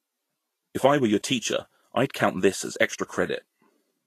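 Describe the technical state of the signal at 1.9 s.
At 1.9 s the speech sits inside a fault that runs through the whole clip: lossy Vorbis compression, likely at a low setting, with damage that fits a bitrate near 34 kbps. The encoder keeps a smooth spectral outline but quantises the fine treble detail so coarsely that it turns into noise of similar energy, and it discards everything above 14.2 kHz. The result is a hissy, grainy top end with roughened tones and softened consonant attacks.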